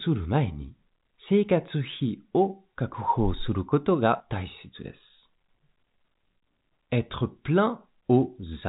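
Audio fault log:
No faults are present in the speech recording. The G.711 telephone coding can be heard as a band that stops at 3.8 kHz, with at most a faint grain riding on the signal and following its level.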